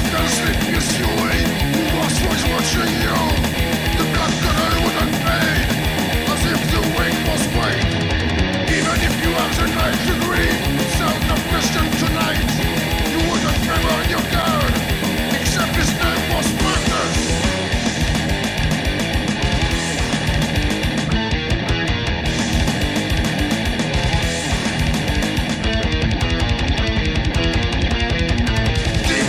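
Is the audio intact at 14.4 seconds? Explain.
No. At 14.42 s there is an underrun with held sample. The output buffer ran dry for about 5 ms. During that gap the converter kept repeating its last value, so the waveform sits flat. The sound stops almost silently. Roughly 5 ms of live audio went missing while the buffer was empty. When data returns, it resumes at a later point.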